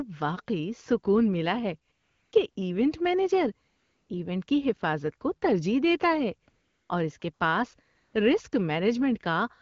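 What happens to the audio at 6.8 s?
At 6.8 s there is AMR comfort noise, running from 6.49 to 6.89 s, between "کو ترجیح دیتا ہے" and "اور اس". The phone judged the talker silent and sent no speech frames for 400 ms. The receiver filled the gap with smooth synthetic noise. It replaces the real background and switches in and out.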